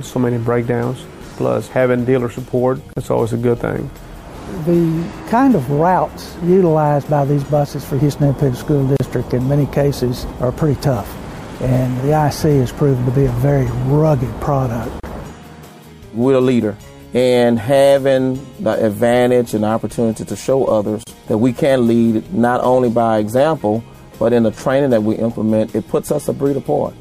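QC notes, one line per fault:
2.93, 8.97, 15.00 and 21.03 s: gap at a join of encoded pieces. A silence of about 34 to 35 ms cuts into continuous sound at each point. The gaps recur every 6.0 s. The edges are smeared by the codec. The sound then resumes where it stopped. Each piece was encoded separately and joined untrimmed. The encoder's start delay and last-frame padding both remain, leaving a short hole at every seam.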